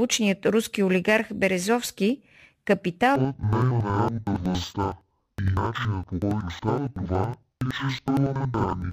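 From 3.16 s to the end at 8.93 s, interleaved audio is read as planar: each block of about 93 ms, which fits a 4096-sample block, is split into halves that play together at half speed. The speech drops an octave, sounds doubled, and chops roughly 11 times per second.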